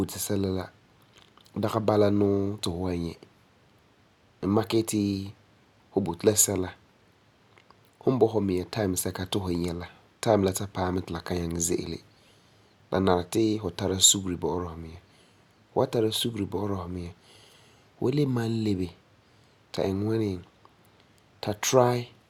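No technical faults are audible.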